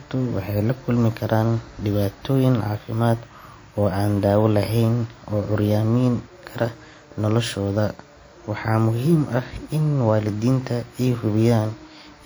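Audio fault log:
Throughout, WMA compression: the speech carries a plainly audible ringing, washy quality, with a hiss that swells and falls along with the signal's level. This is likely a simple transform encoder working in long blocks, so quantisation noise is smeared over tens of milliseconds around each sound and weak detail drops out. The damage fits a first-generation WMA encoder near 48 kbps. Unlike a band-limiting codec, content still reaches about 20.1 kHz.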